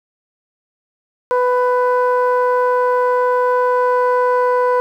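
Nothing is heard for the first 1.31 s, then the music bursts in at full level mid-phrase, with no attack or fade-in. This is a cut-off start: capture began late, so the material arrives already in progress after a stretch of digital silence.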